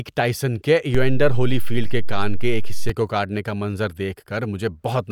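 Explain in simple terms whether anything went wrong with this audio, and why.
Something did go wrong, in one place. At 0.95 seconds, right after "ٹائسن کے", the waveform's resting level jumps away from zero. This is called a DC step. It is like the floor under the sound suddenly shifting. The shift lasts until 2.90 seconds, just before "کو کاٹنے کا منظر", where it goes away. Each jump is heard as a low thump or click. The speech itself carries on unchanged through both.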